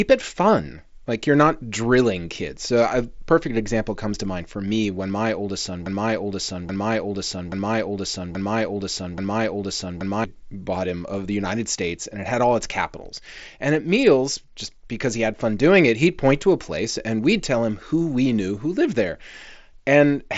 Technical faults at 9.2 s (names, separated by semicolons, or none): broken-record loop